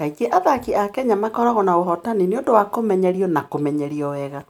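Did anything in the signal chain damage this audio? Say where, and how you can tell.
No, nothing audible in this speech points to damage at any stage of the chain, from capture through conversion and transmission to playback.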